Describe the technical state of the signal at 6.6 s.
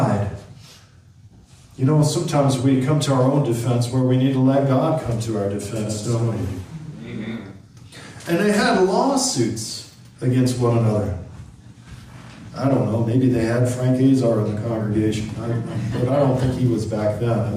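At 6.6 s a doubled audio track is heard, from 5.76 to 7.32 s. A full-band copy trails by roughly 150 ms, about 5 dB quieter. A second capture path is likely.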